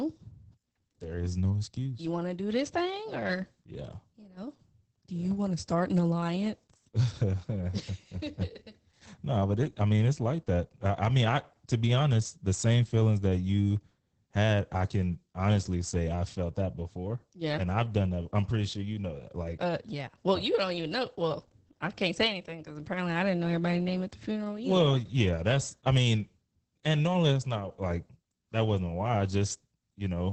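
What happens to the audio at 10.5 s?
At 10.5 s the speech is under Opus voice compression, present throughout. The SILK linear-prediction coder at 10 kbps codes the excitation coarsely, making the sound muffled, hoarse and slightly robotic. A spectrogram shows a hard ceiling near 8.5 kHz and blurred harmonics.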